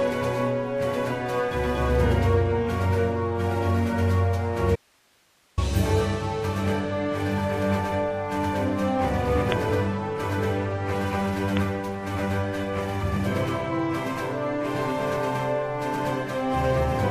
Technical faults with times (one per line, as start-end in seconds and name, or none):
4.76-5.58 audio dropout to a faint residue